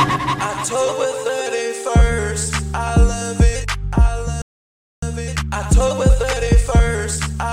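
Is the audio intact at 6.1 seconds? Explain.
No. At 6.1 s the audio is inside a time-compressed catch-up running from 5.02 to 7.38 s. After a stall, the player shortens its backlog by removing small segments and cross-fading across the joins, so the audio plays hurried at 1.25 times normal speed while its pitch stays unchanged.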